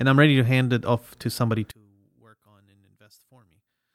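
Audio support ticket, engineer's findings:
From 1.71 s, right after "it off to somebody", to the end: speech collapses to a faint residue, about 31 dB down on mono sum. Likely one channel inverted, a polarity flip in one leg of the stereo path. Centred speech cancels when the channels are summed, leaving only their small difference.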